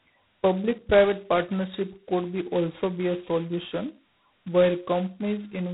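G.726 ADPCM coding runs through the whole clip, heavily. Each sample carries only a few bits of difference from an adaptive prediction, a coarseness that points to the 16 kbit/s rate. The speech rides on a harsh, rasping hiss that rises and falls with its level, and nothing passes above 3.9 kHz.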